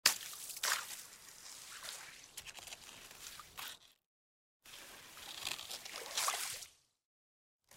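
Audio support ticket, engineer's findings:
Periodic USB or driver dropouts, 0.64–7.62 s: ticks or pops every 1.0 s, about seven, each skipping roughly half a millisecond. A background task is blocking the USB bus or driver.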